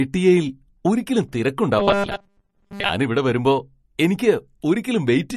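From the start, the speech carries plainly audible MP3 compression damage, likely from a low bitrate, around 40 kbps. Nothing sounds above about 13.1 kHz, and the consonants sound watery and swirly. Unlike a plain low-pass filter, the damage flickers from moment to moment.

Between 1.79 and 2.89 s, after "ഒരിക്കലും തിരക്ക്" and before "ഇവിടെ വരുമ്പോ എനിയ്ക്ക്", there is a robotic sound from repeated short buffers. A rigid, metallic 200 Hz buzz still roughly follows the speech. It likely comes from a 5 ms stretch being looped while most of the real audio is skipped. Unlike codec swirl, it has a fixed pitch.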